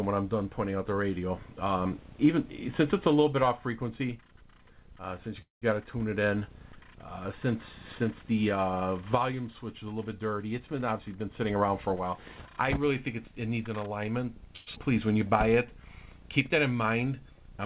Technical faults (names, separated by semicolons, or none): call audio freeze; jitter buffer speed-up; skip ahead; jitter buffer slow-down